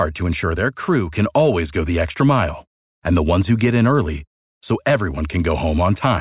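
Nothing in the recording stood out as a technical fault on listening.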